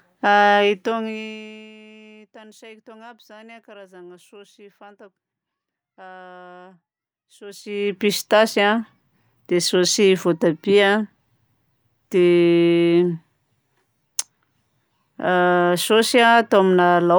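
From 7.40 to 8.01 s, the speech has zipper noise. The level shifts by roughly 25 dB in coarse, unsmoothed steps, around a hundred a second. Each jump leaves a tiny click. Together they make a fast ticking buzz riding on the speech while the level moves.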